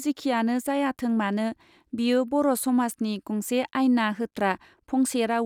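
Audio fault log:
No faults heard anywhere in the speech.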